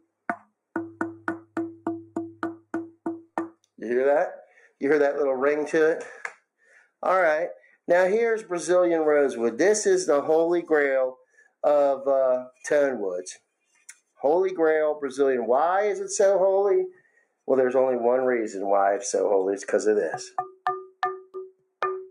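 At 6.62–6.88, 7.6–7.76, 11.15–11.55, 16.93–17.49, 20.86–21.02 and 21.2–21.75 s, the noise suppressor mistakes parts of the sound for noise and pulls them down, by about 9 to 22 dB at the deepest, for about 150 to 400 milliseconds each. Sustained and decaying portions sink or get their tails clipped while sharp onsets survive. Unlike a dropout, the sound thins and dips rather than vanishing abruptly.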